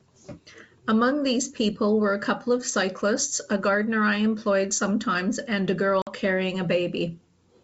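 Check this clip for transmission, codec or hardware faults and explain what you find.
One fault, packet loss on an ADPCM call. At 6.02–6.14 s a hard-edged silence cuts in, then the speech resumes slightly distorted before settling. About 50 ms, roughly five packets, went missing, and the decoder's predictor and step size drifted from the sender's. Around it, the G.722 wideband coding at 64 kbit/s shows faint or no coding damage.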